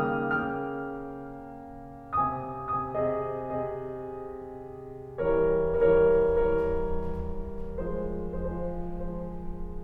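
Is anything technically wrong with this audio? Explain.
Yes. The music carries a doubled audio track for the whole clip: a second full-band copy runs roughly half a second behind the original, about 5 dB quieter. The likely cause is the same signal being captured twice, once through a slower path. Every attack returns as a clean, dry repeat with no decay or room colour. On a waveform, each transient has a smaller twin offset by about half a second. On a spectrogram, every event appears twice, shifted in time.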